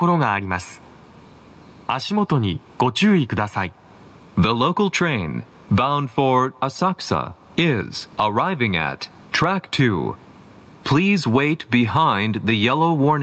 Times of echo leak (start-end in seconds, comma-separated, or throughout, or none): none